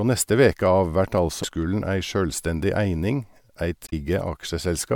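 At 1.40 to 1.44 s, between "neste veke av vert" and "ei sjølvstendig eining", and again at 3.85 to 3.93 s, damaged data in the compressed stream makes the decoder lose sync, heard as a brief glitch. Each appears as a jagged discontinuity in the waveform.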